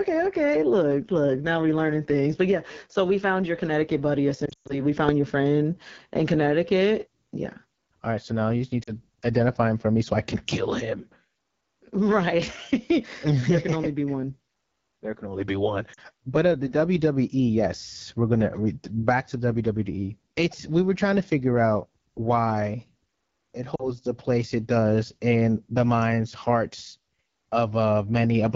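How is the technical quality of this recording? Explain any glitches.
The recording has audible technical problems: a coarse, band-limited codec sound throughout and four short dropouts.

Across the whole clip the speech sounds rough and raspy, with a hissy, noise-like top end. That is AMR wideband (HD Voice) codec damage at a low rate, which fits roughly 8.85 kbit/s. A pulse-excited vocal tract model rebuilds the sound up to 6.4 kHz and fills the band above with shaped noise.

The clip also has lost AMR speech frames. From 4.45 to 4.82 s, just before "we found your friend", the sound briefly fades out for about 120 ms, with around 180 ms missing in total. Brief dips or warbles occur at 8.83 to 8.91 s, between "now you just need" and "identify him for me", at 15.93 to 16.01 s after "can only be one", and at 23.75 to 23.91 s. Each of these three loses about 40 ms. In every case the decoder filled the gap by repeating its last good pitch and vocal tract settings at falling gain.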